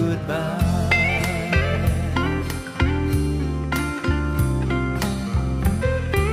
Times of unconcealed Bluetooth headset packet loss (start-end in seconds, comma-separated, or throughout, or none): none